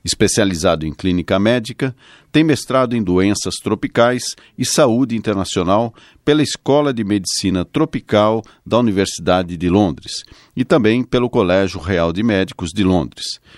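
No technical faults can be heard in this recording. The speech continues without any audible disturbance at any point.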